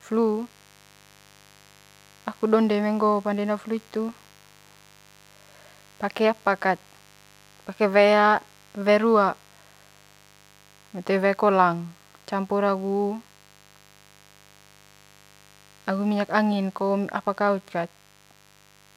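Mains buzz runs throughout this speech recording: a steady, raspy 50 Hz buzz roughly 30 dB below the voice, from switching spikes twice per cycle whose harmonics reach several kHz.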